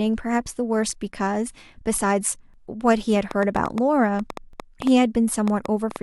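Overlap between stream segments occurs at 2.54 s. Two pieces of the speech stream claim the same stretch of time, and the player discards the doubled portion even though the audio was never actually repeated. A few milliseconds vanish and the waveform jumps.

A train of clicks runs from 3.31 to 5.97 s, around fifteen pulses at roughly 5.3 per second on an irregular pace. They are similar in shape and peak around 10 dB above the speech, ticking over it and through the gaps. The likely source is electrical interference or a faulty connection or power supply.

A second overlap between stream segments comes at 4.53 s, about 2 s after the first, which fits a stream cut into 2-second segments whose time stamps disagree at the joins. Again a few milliseconds are cut away, leaving a tiny skip.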